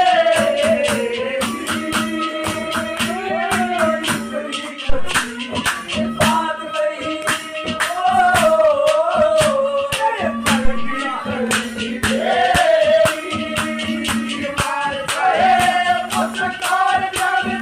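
At 4.89 s a phantom power thump hits, lasting until 5.17 s. It peaks at about -4 dBFS and dies away in roughly 63 ms. A second thump follows at 10.65 s, running to 11.07 s, again near -4 dBFS, with a longer decay of about 95 ms. Each one comes from a supply being switched on a live input. The sudden voltage step passes through the coupling capacitors and emerges as a deep, dull blow.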